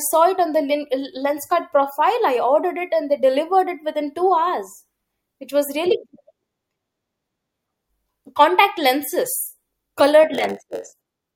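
A speech recording with a block size mismatch (padded) from 10.33 s to 11.34 s, starting just after "contact lenses colored". One stage hands over shorter blocks than the next stage expects, and the shortfall in each block is filled with zeros. Those repeated silent slivers produce a buzz at about 92 Hz, the block rate, and stretch the audio to about 0.92 times normal speed while the timbre stays.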